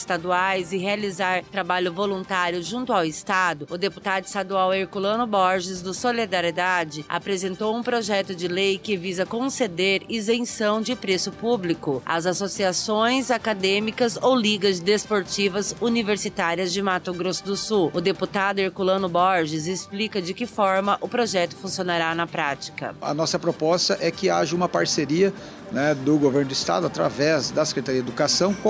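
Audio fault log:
Throughout, gain pumping: the gain swings by around 5 dB, so loud and soft parts sit closer in level and the sound feels squashed. The likely cause is input gain set far too high, with a fast limiter clamping each peak. The waveform shows flattened peaks. On a spectrogram nothing reaches above the 8 kHz ceiling of the call processing.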